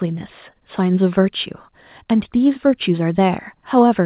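No technical faults are audible.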